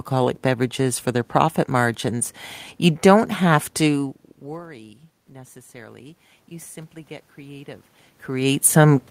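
From 4.46 to 6.79 s, after "you don't have to", the input falls by about 23 dB as the talker moves away, so the automatic gain rises, lifting gain about 3 dB. Voice and room noise swell together until "get creative".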